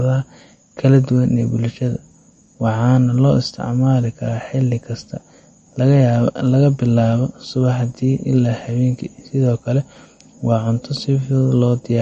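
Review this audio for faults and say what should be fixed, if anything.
Throughout, nothing reaches above 8.6 kHz and the speech has plainly audible watery swirl, likely MP3 compression, consistent with 40 kbps: short of bits, the encoder cuts treble and toggles weak bands. Prevent it by encoding at a higher bitrate or keeping an uncompressed master.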